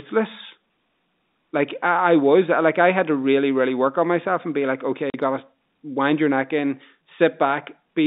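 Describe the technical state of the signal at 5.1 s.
At 5.1 s the speech drops out abruptly into dead silence for 40 ms, from 5.10 to 5.14 s, between "and be like okay" and "you gotta wind your", with hard edges on either side. This is packet loss filled with silence: audio packets never arrived, and the receiver simply played nothing in their place. The 40 ms gap points to two lost packets of 20 ms each.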